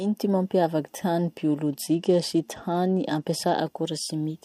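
From 1.66 s to 3.60 s the speech turns dull and loses its treble while a gritty noise rises, then clears. It is a Bluetooth SBC bit pool drop: the link ran short, so the encoder starved the upper sub-bands and quantised the rest coarsely, which fits a fall from bit pool 28 to 12, near 96 kbps.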